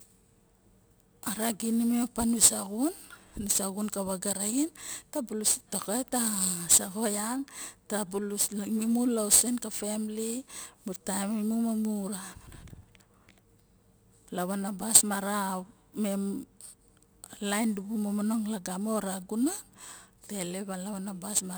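Right from the start and all the way through, there's crude rate conversion. Samples were simply dropped with no filtering, which fits a 48 to 44.1 kHz change, leaving a gritty, inharmonic fizz that rides along with the speech, only about 15 dB below it.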